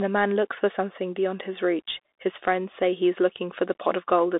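Throughout, the speech sounds thin and boxed in, with scratchy s sounds, granular hiss and nothing above 3.8 kHz: the Bluetooth CVSD headset codec's one-bit slope coding.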